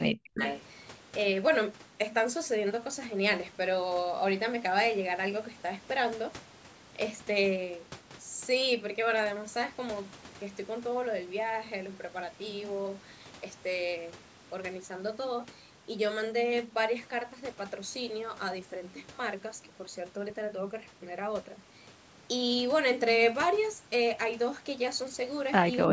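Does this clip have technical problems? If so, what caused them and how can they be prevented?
Yes. Speech suppressed in double talk occurs from 0.13 to 0.41 s, where the voice drops by roughly 40 dB, and from 25.86 s to the end, with a dip of about 15 dB. An echo canceller likely mistook the talker for echo while both sides spoke and turned both down. Tuning its double-talk detection would prevent this.

Echo leak runs from 0.35 to 0.61 s: a copy of the voice returns 254 ms late, about 10 dB below the speech, likely because loudspeaker sound reached a microphone and the canceller passed part of it. Headphones on the loudspeaker side would prevent it.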